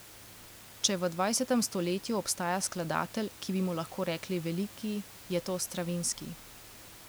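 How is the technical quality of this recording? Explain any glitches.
No glitches: the only thing under the speech is the room's own background noise, about 19 dB below it, which belongs to the recording space rather than the system.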